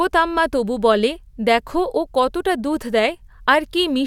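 Nothing goes wrong anywhere in this bit of speech, so there's no technical fault to point to.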